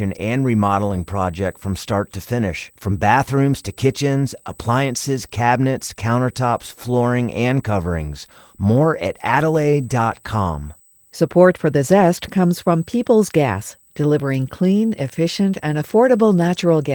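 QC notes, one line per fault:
throughout: USB whine. A steady, fixed-pitch tone at 8 kHz sits roughly 30 dB below the speech for the whole clip. That pitch matches the 125-microsecond microframes of a high-speed USB bus, whose current draw leaks into the audio through power or ground. On a spectrogram it is a thin, unbroken horizontal line at 8 kHz, clearest in pauses; on the waveform it is only faint fuzz between phrases. The Opus coding is light and fullband.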